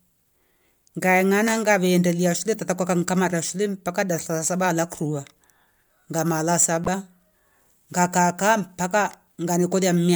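At 2.54 s and again from 6.84 to 6.88 s the speech is broken by damaged data in a compressed stream. Corrupted bytes make the decoder misread frames and lose sync until it finds the next valid header, so each spot gives a brief chirp or blip. On a spectrogram these appear as narrow vertical smears of broadband energy; the waveform shows a short, jagged burst breaking the speech envelope.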